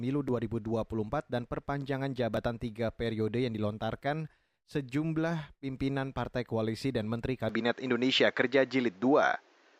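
At 7.49 s the speech abruptly turns duller, losing everything above 7.6 kHz, shifting level about 5 dB and adding faint noise: likely an input switched to a poorer device.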